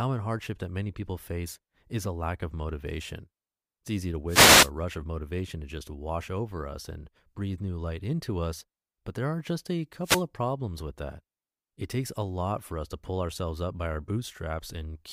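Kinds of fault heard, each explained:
Wireless microphone noise hit: the analogue FM radio link fades as reflected signals cancel, letting receiver hiss surge, at 4.27 to 4.71 s and 10.02 to 10.24 s. Unlike steady background hiss or a digital dropout's clean gap, each is a brief swish of static.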